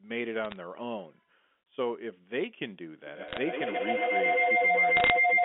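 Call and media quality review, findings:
Bit errors on the digital phone line: short crackle bursts at 0.44–0.56 s, 3.28–3.38 s and 4.97–5.10 s. A fraction of a percent of bits flipped in the G.711 stream, so single samples jump into sharp ticks.

Feedback howl from 3.06 s to the end: a tone around 2 kHz pulsing roughly every 150 ms and peaking about 7 dB over the speech. Two devices in the same room are on the call, so the mic-to-speaker loop keeps gaining on every pass until something gets muted.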